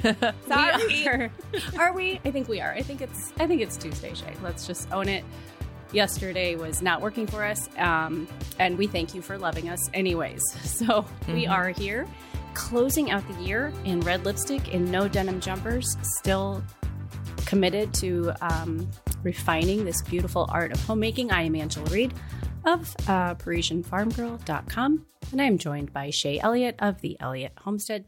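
No technical faults can be heard anywhere in the signal, which stays steady and intact throughout.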